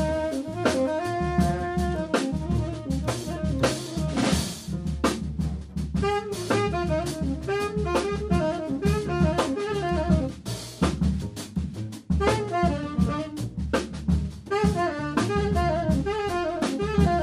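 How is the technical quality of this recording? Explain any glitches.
Nothing in the recording stood out as a technical problem on listening.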